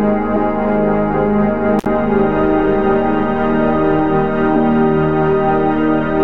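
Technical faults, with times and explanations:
1.79–1.86 s, intermittent contact: a loose plug or cable connection briefly lost contact, breaking the signal path for about 62 ms before the contacts met again. With the circuit open, the music drops out abruptly and only a faint hiss remains in the gap. The metal surfaces scraping as they part and reconnect produce a sharp crackle at both edges of the dropout, so the music stutters and snaps back rather than fading out.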